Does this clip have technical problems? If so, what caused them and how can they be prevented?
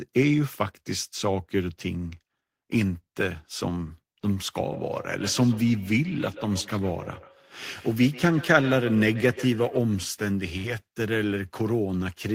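Yes. From 4.72 to 9.87 s there is feedback echo between two devices: speech returns roughly every 150 ms, up to about -16 dB, growing thinner and more ringing, unlike ordinary room reverb. Mute one device's speaker or microphone.

At 10.57 to 10.66 s, a burst of packet loss: sound is held and fades for 65 ms, then resumes with 60 ms missing, not silent like a dropout. A steadier network connection prevents this.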